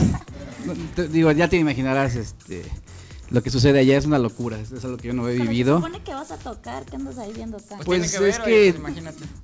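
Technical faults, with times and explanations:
The signal shows no technical faults, and its content stops at 8 kHz, which fits a wideband call path, such as G.722 at 64 kbps, carrying the audio as designed.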